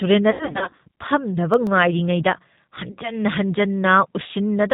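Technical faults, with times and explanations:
Throughout, G.729 codec: the speech is rebuilt from a vocal tract filter, a pitch predictor and a few pulses per frame, which fits an 8 kbit/s stream. Nothing above 4 kHz survives, and the voice has a plainly audible rough, synthetic edge.
0.31 to 0.80 s, VoIP packet loss concealed by the speech codec: about 270 ms of audio went missing in scattered gaps over roughly half a second, the longest run 90 ms, which points to about nine lost packets. The decoder stretched its last pitch and filter with falling gain, so the sound turns into a buzzy tone or coloured noise that fades, and stays weak for a while after each gap.
1.54 to 1.80 s, CD scratch ticks: three brief ticks, each under a millisecond, where damaged data was too much for error correction and the player patched or muted a few samples. They come as a short regular cluster of clicks.
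2.92 to 2.99 s, VoIP packet loss concealed by the speech codec: a 60 ms gap, which points to two lost packets, filled by the decoder extrapolating from the preceding frame. The sound briefly smears into a fading buzzy tone or coloured noise before it recovers.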